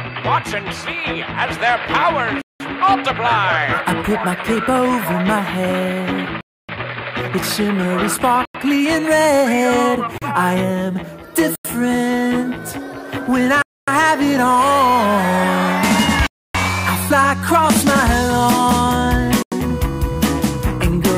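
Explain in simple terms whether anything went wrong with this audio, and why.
The sound drops out eight times, at 2.42, 6.41, 8.45, 10.18, 11.55, 13.62, 16.27 and 19.42 seconds, each a block of digital silence lasting from about 0.04 to 0.28 seconds. The playback program likely fell behind and left whole chunks empty, and several gaps are exactly 93 or 186 milliseconds, which fits a buffer of 4096 samples going unfilled. Unlike a fade or volume dip, the sound switches off and back on instantly.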